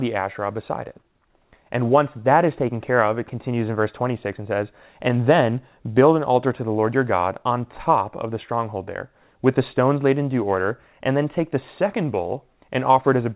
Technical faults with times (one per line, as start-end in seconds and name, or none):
none